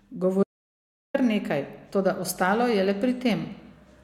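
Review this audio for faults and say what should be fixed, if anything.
At 0.43 s the speech cuts out to silence, with no room tone underneath, and returns at 1.14 s just before "kar nekaj toda ostalo". That is an audio dropout to silence lasting about 0.71 s. The likely cause is a momentary loss of the input, such as a disconnected device, a failed link or a brief mute, while the recorder kept writing silence, so whatever was said in that gap is unrecoverable. Prevent it by securing connections, monitoring input levels live, and recording a backup track.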